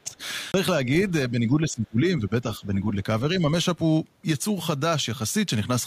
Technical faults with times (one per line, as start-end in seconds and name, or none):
0.04-0.20 speech suppressed in double talk
0.52-0.54 CD skip
1.31-2.96 speech suppressed in double talk